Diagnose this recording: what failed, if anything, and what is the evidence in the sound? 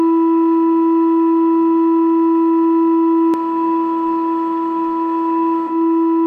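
From 3.34 s to the end, an equally loud, dry copy of the music trails about 0.7 s behind. This is a doubled audio track, likely from a second, slower capture path.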